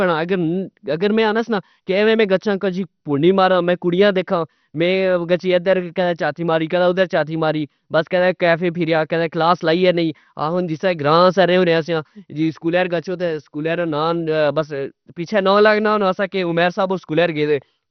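From start to finish the speech sounds dull and gurgling, with granular distortion, most likely heavy MP2 compression at a low bitrate near 48 kbps. A spectrogram shows nothing above 6.2 kHz and upper bands flickering on and off as bits run short.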